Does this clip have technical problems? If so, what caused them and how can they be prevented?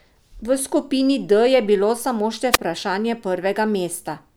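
Yes. A wireless microphone squelch dropout occurs from 2.52 to 2.58 s: the analogue FM radio link weakens until the receiver's squelch closes, so hiss swells briefly before the output is muted for about 12.5 ms, then the speech returns. Keeping the transmitter close, in line of sight, with diversity antennas prevents this.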